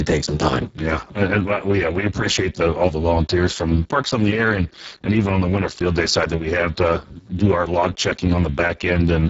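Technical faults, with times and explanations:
Throughout, Speex codec: speech sounds hoarse and noisy, with nothing above 7.7 kHz, consistent with a very low bitrate near 6 kbps starving the excitation.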